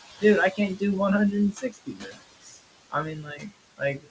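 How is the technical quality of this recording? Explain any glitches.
The recording has two related faults, both from noise suppression acting on room noise that sits about 13 dB below the speech, over a call path with nothing above 8 kHz.

Noise suppressor artifacts run throughout. The suppressor pulls the steady background down by about 18 dB between phrases, so the residual noise pumps frame by frame.

Speech cut by the noise suppressor occurs from 1.52 to 2.23 s (deepest drop about 19 dB), 2.41 to 2.59 s (about 14 dB) and 3.23 to 3.52 s (about 10 dB). The suppressor mistook quiet speech for noise and attenuated it, so those stretches sound swallowed and faint.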